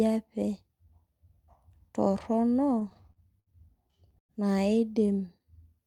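From 2.75 to 3.50 s, packets arrived late or more slowly than they were played, and the jitter buffer kept running dry, causing repeated stalls (stutter). The receiver bridged seven gaps by extending the last sound, about 152 ms in all (roughly a fifth of that stretch), the longest 68 ms. The same fault returns from 3.87 to 4.32 s with five gaps totalling 144 ms, about a third of the span. The longest, 102 ms, is stretched long enough to fade. No speech is lost, but both passages drag and stutter.

From 5.06 to 5.46 s comes a jitter buffer slow-down. To build up a reserve, the receiver repeated single pitch periods and slivers of pauses, adding 68 ms. That passage plays at about 85% speed with the pitch unchanged, so sounds come out drawn out, a brief unnatural slowing rather than a break.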